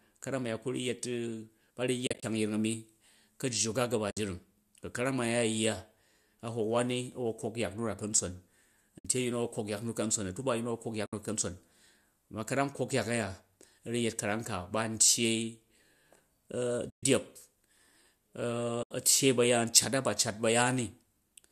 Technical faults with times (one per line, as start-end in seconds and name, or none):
2.06-2.23 AAC frame loss with muting
4.11-4.17 AAC frame loss with muting
8.99-9.05 AAC frame loss with muting
11.05-11.13 AAC frame loss with muting
16.89-17.03 AAC frame loss with muting
18.82-18.91 AAC frame loss with muting